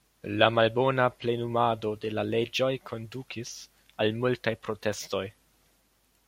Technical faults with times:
none

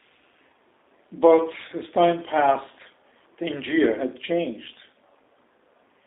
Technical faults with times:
0.00-6.07 G.729 codec

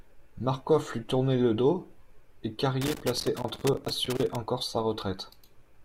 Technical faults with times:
2.81-4.36 loose connector crackle

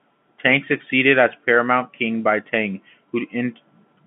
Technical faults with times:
none

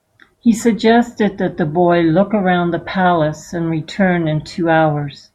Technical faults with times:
none

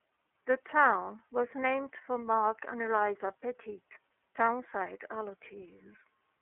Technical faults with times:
0.00-6.42 iLBC codec

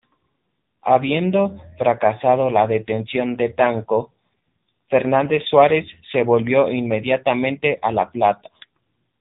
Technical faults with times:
0.00-9.21 AMR narrowband mobile codec

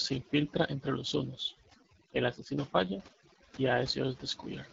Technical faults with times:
0.00-4.72 overdone noise removal
0.00-4.72 AMR wideband (HD Voice) codec

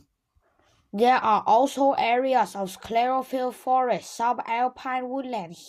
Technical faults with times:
none

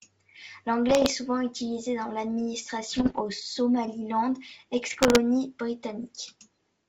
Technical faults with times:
0.88-1.12 bit errors on an ADPCM link
2.97-3.22 bit errors on an ADPCM link
4.90-5.19 bit errors on an ADPCM link

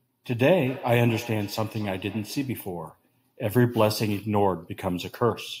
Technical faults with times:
0.65-2.64 feedback echo between two devices
5.24-5.60 Bluetooth SBC bit pool drop

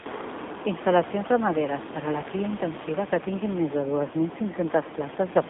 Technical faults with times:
0.00-5.50 AMR narrowband mobile codec

